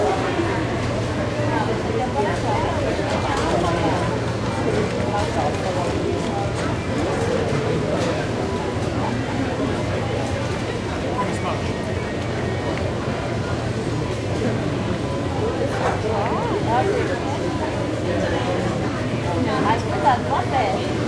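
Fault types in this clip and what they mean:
No technical faults can be heard in this recording of sounds; the signal stays steady and intact throughout, with nothing that points to a problem in capture, transmission or playback.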